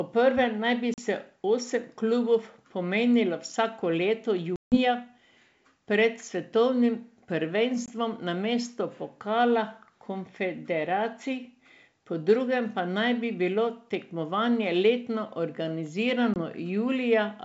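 Packet loss on an ADPCM call cuts hard-edged silent holes at 0.94–0.99 s after "naj bi", 4.56–4.78 s after "klubov pomerilo vsako leto", 7.86–7.89 s and 16.34–16.41 s, losing 40, 160, 20 and 20 ms. Each time, the decoder's predictor and step size fall out of step with the sender's, so the speech resumes and briefly distorts before resettling.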